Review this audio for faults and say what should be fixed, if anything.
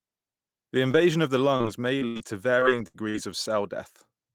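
Two brief smears, at 0.91 to 0.95 s and again at 2.60 to 2.63 s, sound like a tiny wobble where the speech seems to stretch for an instant. This is short concealed packet loss. About 20 ms of audio arrived too late each time, so the receiver extended the preceding sound to fill the hole and blended back into the real signal. A fleeting consonant can disappear inside such a patch.

From 1.57 to 2.22 s the speech turns choppy, with pieces dropping out. This is repeated packet loss. Five separate gaps, the longest about 77 ms and roughly 160 ms in total, each got patched by continuing the last sound, and the next gap came before the voice could settle. Around a quarter of that stretch is synthesised fill rather than real speech.

At 2.87 to 3.03 s and then 3.09 to 3.16 s, the sound holds and fades, a sustained buzz or dying hiss, before the speech resumes a little further along. These are bursts of packet loss. 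About 60 ms and then 40 ms of consecutive audio failed to arrive, so the receiver extended the last sound while turning it down, and in the first burst a further sliver of about 9 ms was dropped outright.

To prevent these, stabilise the network path and give the receiver a larger adaptive jitter buffer, adding forward error correction or redundancy so lost packets can be rebuilt rather than guessed.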